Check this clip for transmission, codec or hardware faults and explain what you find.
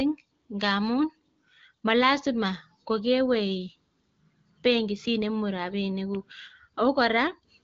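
No faults found in this clip.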